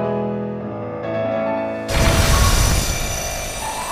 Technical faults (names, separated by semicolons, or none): buffer tearing